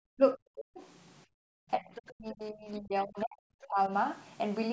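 Speech recorded through a call's microphone path, with nothing above 8 kHz, and marred by echo-canceller behaviour in three forms. Speech suppressed in double talk occurs at 0.13–0.83 s, 1.78–1.9 s and 2.11–3.91 s. The talker's level sinks by around 40 dB in the first and last spans, with roughly half a second and about a second of the sound affected, and by only about 10 dB in the brief middle dip. In each case the likely cause is the canceller failing to tell the local talker from loudspeaker echo while both sides spoke, so it attenuated everything. Background gated by the echo canceller shows up at 1.26–1.5 s. The room sound is pulled down hard, by about 39 dB over roughly 200 ms, because the canceller clamped the microphone while the far end was playing and then released it. The other side's voice leaking through appears at 1.95–2.12 s, about 15 dB below the talker, and again at 3.61–3.66 s, about 25 dB down. 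Both are short scraps of a second voice, likely far-end audio from the loudspeaker that the canceller left in the microphone signal. The second scrap falls inside the long suppressed stretch, so leaked echo and attenuated local speech overlap there.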